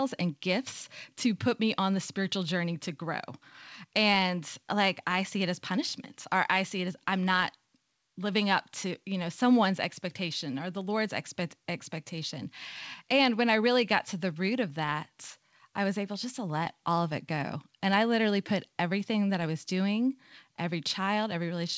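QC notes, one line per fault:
The speech has come over a call path whose band stops at 8 kHz, which fits G.722 at 64 kbps, and the signal carries no audible fault.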